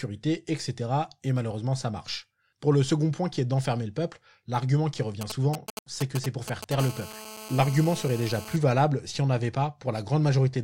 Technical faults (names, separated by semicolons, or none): GSM signalling bursts; GSM phone buzz